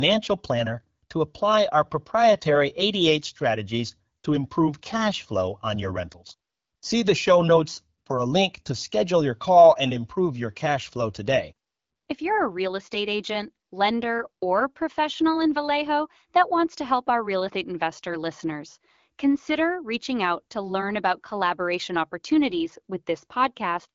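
At 6.92 s, between "flow on your rentals" and "the show notes for", new audio arrived late, so the device played its last buffer two extra times. This repeated buffer, about 1.33 ms long (fitting a 64-sample buffer), is heard as a click or brief buzz.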